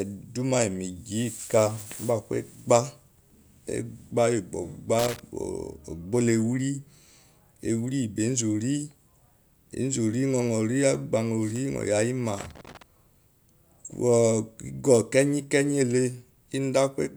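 At 4.99 s a burst of loose connector crackle cuts into the speech and lasts until about 5.20 s. A worn or dirty contact is making and breaking as the cable moves. Each break chops the signal, and any DC on the line turns into pops. It sounds like irregular scratching. A second, longer burst runs from 12.38 s to 12.82 s. It has the same ragged, crackling texture.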